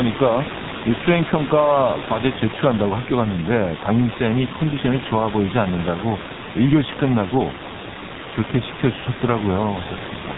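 From start to finish the speech sounds muffled and hoarse, with smeared consonants and nothing above 4 kHz, the heavy damage of the G.723.1 codec, which fits a rate near 6.3 kbit/s. It codes 30 ms frames with a slowly updated voice model. Room noise sits about 10 dB below the speech.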